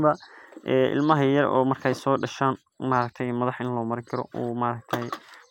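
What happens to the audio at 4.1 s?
Nothing goes wrong at 4.1 s; the speech carries on intact through that moment with no dropout, click or distortion to be heard.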